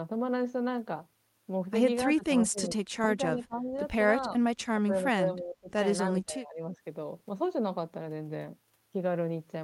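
The speech dips at 2.15–2.77 s, 3.07–3.73 s, 4.27–4.43 s, 4.72–5.70 s and 6.12–6.77 s, sinking by roughly 10 to 25 dB. This is likely speech suppressed in double talk. The echo canceller mistook the talker for echo and turned the voice down.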